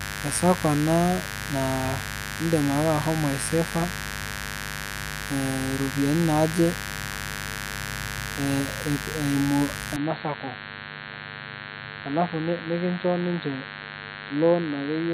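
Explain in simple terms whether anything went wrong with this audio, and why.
Mains buzz runs through the whole recording: electrical interference from the 50 Hz power supply leaked into the audio path, bringing sharp spikes twice per cycle. You hear it as a steady, raspy buzz sitting fairly loudly under the speech from start to finish.

At 9.96 s the recording most likely had its input switched to a poorer device, such as another microphone or a headset. From there to the end, the speech suddenly sounds duller and boxier, with nothing above about 4.3 kHz. It gets slightly quieter, and a faint new background noise appears.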